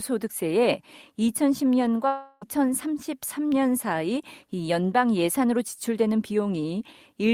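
From 2.07 to 2.43 s, the speech gives way to a smeared buzz that fades. No clean silence follows. About 0.34 s is concealed this way. The speech then resumes with that stretch missing. This is likely a long network dropout.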